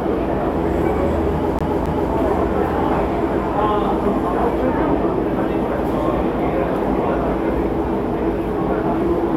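A CD stuck on one turn occurs from 1.59 to 2.13 s. A flaw on the disc surface makes the laser jump back one track each time the disc comes round to the same spot, so a slice of about 0.27 s plays twice in succession. Each jump leaves a brief mute before the slice restarts, producing a quick, evenly spaced stutter in the sound before playback moves on.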